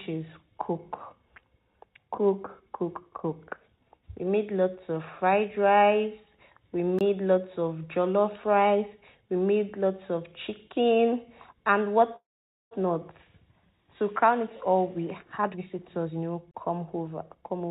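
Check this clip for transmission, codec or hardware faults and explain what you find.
Three kinds of fault can be heard, on top of a call path whose G.711 mu-law coding leaves nothing above 4 kHz.

Block of digital silence, at 6.99 to 7.01 s and again at 16.51 to 16.54 s. The output went silent for about 21 ms and then 32 ms. The first gap fits a 1024-sample buffer that was not filled in time. Each is heard as a short hole. The waveform shows a flat line with square edges, and the spectrogram shows a blank vertical slot.

Call audio freeze, from 12.16 to 12.74 s. Incoming audio stalled, most likely because delayed packets drained the jitter buffer. The receiver bridged roughly 551 ms by continuing the last sound as a buzz that dies into about 490 ms of silence. Playback then resumes exactly where it left off, so nothing is lost, only delayed. The spectrogram shows smeared, repeating harmonics fading into an empty band, with no discontinuity in the material after it.

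Jitter buffer speed-up, from 15.38 to 17.69 s. The buffer held surplus audio. The receiver trimmed it by cutting many short pitch-period slices, roughly 0.3 s in total. The sound plays at about 114% speed while keeping its pitch, so it comes across as hurried. On the waveform, periodic cycles look compressed in time, and spectrogram features are squeezed horizontally without shifting in frequency.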